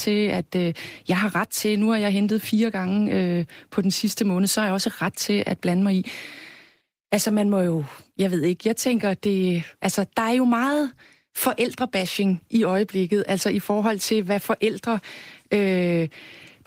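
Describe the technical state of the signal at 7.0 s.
At 7.0 s the speech is intact, with nothing beyond the light, even coloring of the Opus voice compression running in its fullband hybrid mode.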